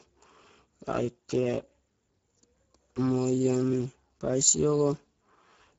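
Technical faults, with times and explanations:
Throughout, Speex codec: low-rate Speex coding, fitting about 10 kbps, starves the excitation, so speech sounds plainly hoarse and noisy, with nothing above 7.6 kHz.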